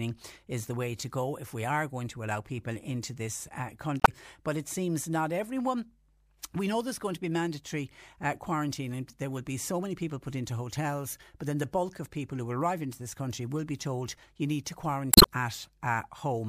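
At 3.99 to 4.09 s, damaged data in the compressed stream briefly garbles the speech. The decoder misreads corrupted frames and loses sync. It happens again at 15.09 to 15.27 s, just after "told you need to".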